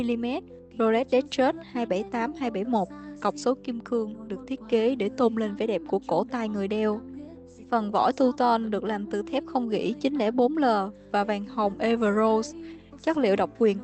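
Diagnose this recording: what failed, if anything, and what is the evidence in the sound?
Nothing has failed here: the sound has come through an ordinary call path, and the top end stopping at around 8 kHz is just what a call codec like Opus set to wideband does, not a fault.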